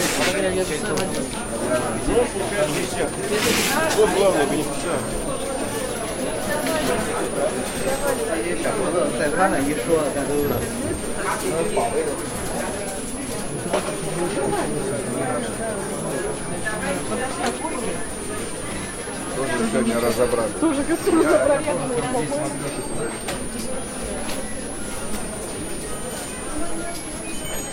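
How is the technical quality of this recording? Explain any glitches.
The technical quality is held back by one fault that runs the whole way through: a switching supply whistle. From start to finish there's a thin, high tone sitting on top of the audio, and it wanders in pitch between about 8.3 and 11.5 kHz, centring roughly on 10 kHz. It's not buried either, sitting something like 15 dB under the main sound. What's happening is a switching power supply cycling at an audible rate and bleeding into the signal.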